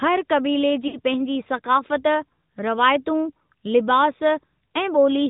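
From start to finish the speech passes through the AMR narrowband mobile codec, and its damage is plainly audible: buzzy, synthetic-sounding vowels with nothing above 4 kHz, which fits the 10.2 kbps mode. A spectrogram shows a hard ceiling at 4 kHz and smeared, blocky harmonics below it.

From 0.88 to 0.97 s come lost AMR speech frames. The decoder covers about 60 ms, which fits three dropped 20 ms frames, by repeating its last pitch and vocal-tract settings at falling gain. This is heard as a brief drawn-out warble and dip, and it looks like a sagging waveform envelope with repeated, stretched harmonic bands.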